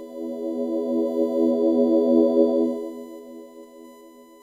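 A USB whine runs through the whole recording: a steady tone fixed at 1 kHz, sitting roughly 35 dB below the sound. It comes from the bus drawing current in 1 ms frames, with that pulsing leaking into the audio through shared power or ground.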